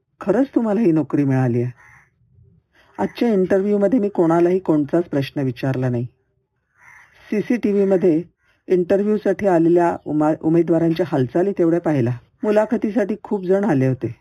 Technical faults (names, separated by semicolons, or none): imaging from linear upsampling